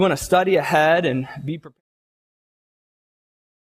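No technical faults can be heard in this audio. A smooth fade out begins at around 1 s and reaches silence at 1.81 s, with no click or hard edge.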